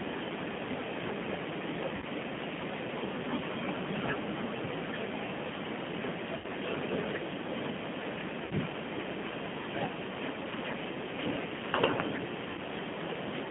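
Throughout, the speech carries plainly audible G.729 codec damage. The band runs only from about 150 Hz to 3.5 kHz. The voice is rebuilt from a filter, a pitch predictor and a few pulses per frame, which fits 8 kbit/s coding. It sounds rough and faintly synthetic.

VoIP packet loss concealed by the speech codec occurs at 1.96 to 2.05 s, 6.38 to 6.46 s, 8.45 to 8.54 s and 12.51 to 12.60 s. Each gap covers 60 ms, which fits two lost packets. The decoder stretches its last pitch and filter into a fading buzz or coloured noise. The speech stays weak or distorted just after each gap.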